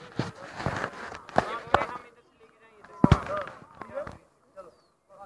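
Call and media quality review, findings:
No impairments found in the signal path; level, continuity and timing are consistent across the capture.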